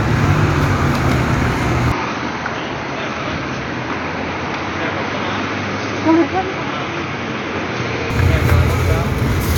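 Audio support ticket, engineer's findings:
Input switched to a poorer device, 1.92–8.10 s: sound dulls, nothing above 6.4 kHz on spectrogram, waveform drops about 5 dB, faint new noise floor. Likely device/profile change, no gap.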